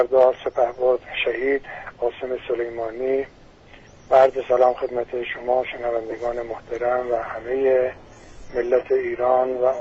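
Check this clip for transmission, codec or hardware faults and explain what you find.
One transmission fault: an adaptive stream at a lower bitrate. From 6.86 s to the end, the connection slowed and playback switched without a gap to a much lower-bitrate version. Treble abruptly thins and turns synthetic, with stronger codec artefacts, consistent with a drop from roughly 96 kbit/s AAC to 12 kbit/s HE-AAC.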